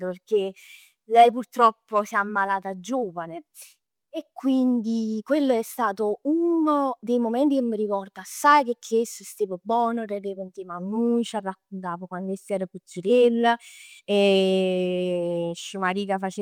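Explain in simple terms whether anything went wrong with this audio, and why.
Nothing went wrong here: there are no technical faults to be heard anywhere in the recording.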